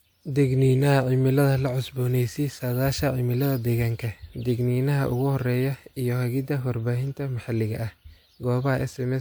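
No technical faults turn up anywhere in this speech recording. There is nothing to place on the timeline.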